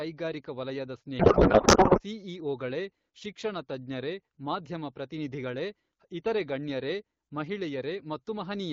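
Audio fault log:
1.19 to 2.01 s, codec payload misread: the speech turns into garbled noise and warble that barely follows it. The AMR wideband decoder reads fields from the wrong bit positions. This fits octet-aligned frames parsed as bandwidth-efficient. Clear speech resumes at "ಸಿಇಒಗಳೇ ಶಿಕ್ಷಣ ತಜ್ಞರೇ ಮಾಧ್ಯಮ".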